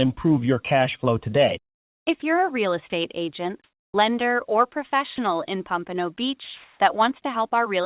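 At 2.20 s, just before "you're a real", a 20 ms stretch of speech is replaced by a short burst of steady noise. This is sound dropped by the voice detector, likely because the sender's detector classed a quiet part of the speech as background and briefly stopped transmitting. The receiver filled the gap with comfort noise. The same 20 ms dropout occurs at 2.90 s, at 5.16 s just after "agent lender or", and at 7.22 s, where at 2.90 s and 7.22 s only about 10 ms of speech is lost.

From 3.64 to 3.94 s, ending just before "lender or", the real background is replaced by comfort noise. It is likely caused by discontinuous transmission, where the sender stops sending during the pause and the receiver synthesises a smooth, featureless noise instead. Here the background sits about 71 dB below the loudest speech, so the 300 ms fill is close to silence and about 3 dB quieter than the room it replaces. 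From 6.44 to 6.80 s, a 360 ms fill is about 6 dB louder than the real background, which is about 39 dB down, so the pause gets louder.

Throughout the clip, nothing is present above 4 kHz, which fits G.711 mu-law at 64 kbps.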